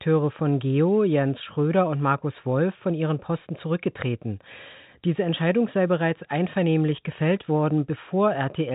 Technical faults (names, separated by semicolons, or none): none